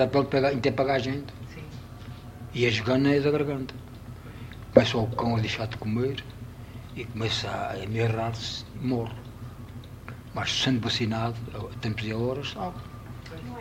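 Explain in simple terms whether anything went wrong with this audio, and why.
Nothing went wrong; there are no faults here.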